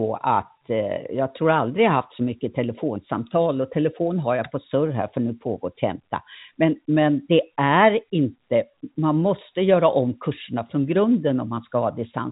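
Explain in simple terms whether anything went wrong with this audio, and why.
Nothing went wrong here: the speech carries the narrow, phone-line sound of G.711 telephone coding, with nothing above about 3.8 kHz, which is how an ordinary telephone channel is built to sound rather than a defect.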